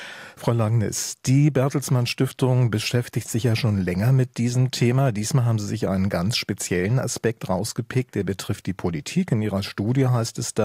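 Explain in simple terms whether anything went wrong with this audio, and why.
Nothing went wrong with it.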